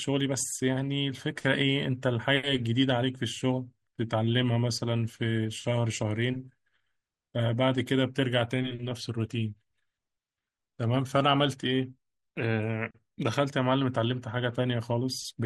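Throughout, the speech sounds dull and gurgling, with granular distortion: likely MP2 compression starving upper sub-bands of bits, which fits a rate near 80 kbps.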